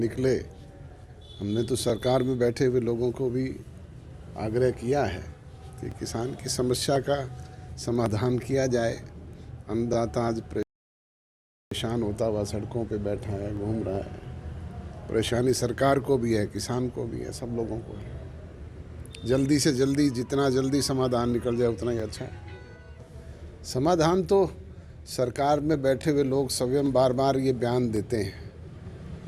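At 1.9, 5.92 and 9.94 s, overlapping chunks: each 4 s chunk repeats 20 ms at the join, giving a brief stutter-click and a doubled vertical seam in the waveform. At 10.63 s a rebuffering stall cuts to silence until 11.71 s, adding 1.09 s. The spectrogram shows a blank gap before the sound resumes exactly where it stopped. The overlapping-chunk clicks continue every 4 s at 13.96, 17.98, 22.0 and 26.02 s.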